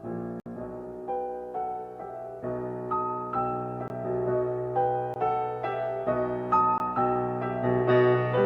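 The sound drops out abruptly four times: a 60 ms hole at 0.40 s, then 20 ms holes at 3.88, 5.14 and 6.78 s. Each is a block of digital silence, with zeros replacing the audio because the output buffer went unfilled or a calculation produced invalid numbers.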